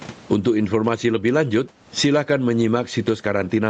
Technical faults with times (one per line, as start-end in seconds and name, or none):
0.00-3.69 gain pumping